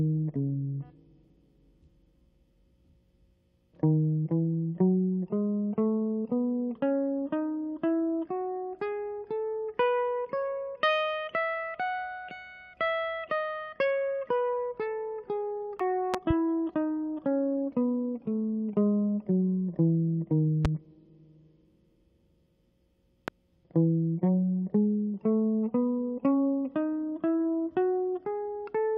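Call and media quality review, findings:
Compressed frames skipped at 15.80 s: decoder dropped damaged or missing frames, music jumps ahead roughly 40 ms.

Loud pop at 16.14–16.33 s (two pops), 20.65 s and 23.28 s: likely electrical transient from a plug, switch or driver glitch. Sharp pops about 15 dB above the music, which continues underneath.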